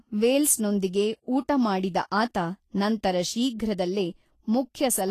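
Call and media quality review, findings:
Vorbis compression, likely cause, whole clip: speech hissy and grainy throughout, plainly audible. Nothing above 14.2 kHz; low bitrate, around 33 kbps, quantises treble coarsely into noise-like residue. Spectrogram: hard ceiling at 14.2 kHz, smeared speckled highs, blurred consonant onsets.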